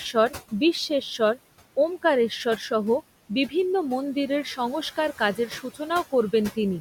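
Noise suppressor artifacts run through the whole recording. The suppressor pulls down bands it treats as steady noise by about 17 dB, frame by frame, so the room noise, sitting about 17 dB below the speech, sinks in pauses and swells under speech.

From 5.36 to 5.8 s comes speech cut by the noise suppressor. The processor misread parts of the speech as noise and attenuated them along with the background, by up to about 9 dB. Roughly a tenth of a second in total sounds swallowed and faint.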